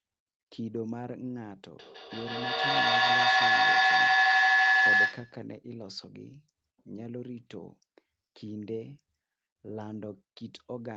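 From 1.71 to 5.51 s a feedback howl builds as a microphone-to-loudspeaker loop gains level each trip, ringing near 1.5 kHz, repeating roughly every 150 ms, peaking about 15 dB above the speech.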